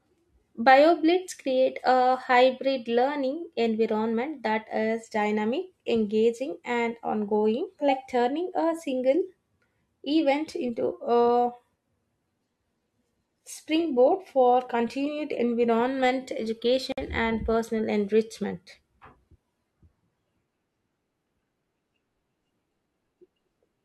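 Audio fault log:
16.92 to 16.98 s, gap at a join of encoded pieces: two separately encoded segments were spliced without trimming encoder delay and end padding, so a silence of about 54 ms cuts into the speech with smeared edges before "and personal enrichment" resumes.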